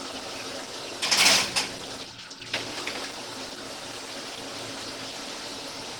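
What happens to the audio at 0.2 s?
At 0.2 s the sound is already rough and grainy, as it is throughout, most likely from Opus compression. The hoarse, muffled texture fits a low rate near 16 kbps in hybrid mode. A spectrogram shows noise-filled, smeared bands rather than holes, extending to 20 kHz.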